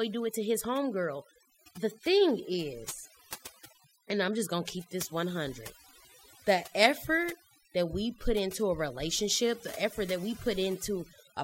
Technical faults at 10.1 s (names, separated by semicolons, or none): overdone noise removal